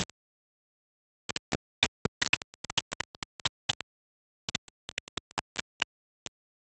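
From start to finish, the sound is coarse and grainy. This is low bit depth without dither. The stepped error is roughly as loud as the sound itself. It tracks every change, and quiet sounds turn gritty. The likely cause is rounding to about four bits.

From 1.66 s to 6.04 s, a jitter buffer speed-up sets in. The receiver trims tiny slices, each one a pitch period or a few long. Playback runs about 5% fast at the same pitch. Roughly a fifth of a second is dropped, so events arrive hurried.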